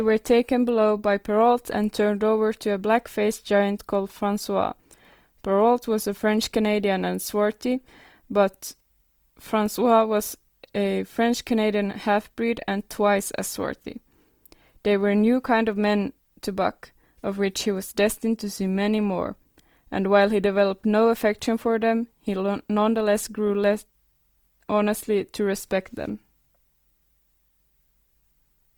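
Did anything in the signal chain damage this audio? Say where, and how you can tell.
Yes, in the codec: throughout, the speech sounds grainy and rough though it reaches about 20 kHz, likely Opus compression filling bit-starved bands with noise.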